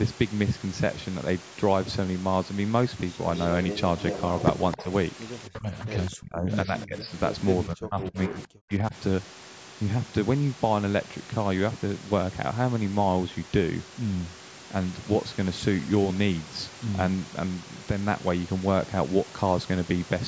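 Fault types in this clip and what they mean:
Echo leak: A delayed second copy of the speech, trailing the original by 264 ms, most likely from a far-end loudspeaker whose echo canceller let part of its microphone pickup return. From 3.37 to 4.84 s it sits only about 10 dB below the speech, and a faint scrap at about 25 dB down appears at 6.06 s. Unlike room reverberation, which decays smoothly, this is a distinct repeated copy at a fixed delay.
Speech suppressed in double talk: The talker's level is pushed down while the other side is also active, likely because the echo canceller could not tell local speech from loudspeaker echo and attenuated both. A shallow dip of about 5 dB occurs at 4.76 to 4.89 s, then deep cuts of up to about 30 dB (5.48 to 7.12 s) and about 40 dB (7.67 to 8.95 s), each affecting roughly a second. Unlike packet-loss dropouts, these are gain ducks, not clean gaps.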